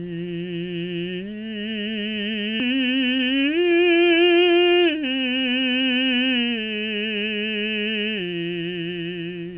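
A 60 Hz mains buzz runs under the music the whole way through, sitting about 35 dB below it. It's that raspy, edgy hum you get when a dimmer, rectifier or badly shielded cable lets sharp spikes in on every half-cycle, so the harmonics of 60 Hz climb well up the spectrum. Here they stop at 4 kHz, because the call path has nothing above that, which fits a narrowband codec like G.711 mu-law.

At 2.6 s there's a skip ahead. Roughly 400 ms of the music just isn't there, and the two sides are butted together with no gap at all. That's what you hear when a chunk is dropped, in transit or by an overflowing jitter buffer, while later audio is already queued. The result is an abrupt jump forward, with the delay shortened by about the same amount.

Straight after, from 2.70 s to 4.82 s, the jitter buffer speed-up kicks in. The receiver is still holding more audio than it wants, so it trims out short pitch-period-sized slices over and over, about a fifth of a second in total. 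Playback runs at 110% with the pitch unchanged, so the music sounds rushed and the tempo pushes forward through that stretch before settling back.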